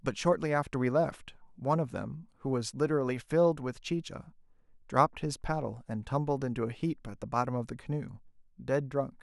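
Nothing goes wrong anywhere in this bit of speech, so there's simply no technical fault to point to.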